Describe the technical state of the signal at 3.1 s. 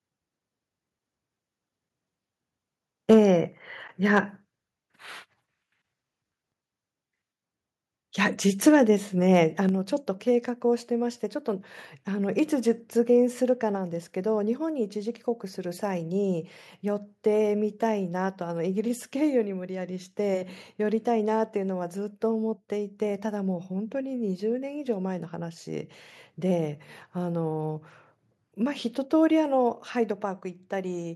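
From 3.09 to 3.19 s the loudest peaks crackle harshly with flattened tops, likely microphone overload, with the input driven about 4 dB past the converter's limit and roughly a tenth of samples clipped. At 3.14 s the whole level, voice and background together, drops abruptly by about 2 dB, likely the microphone volume stepped down by the call software reacting to that clipping.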